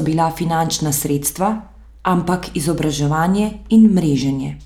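No technical faults can be heard anywhere in the recording; the speech signal stays steady and intact throughout.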